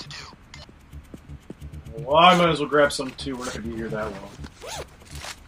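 At 3.49 s there is a single abrupt skip where about 50 ms of audio vanishes and the two sides butt together with no gap. The likely cause is audio missing between chunks, with material dropped at a 2-second chunk boundary during changeover.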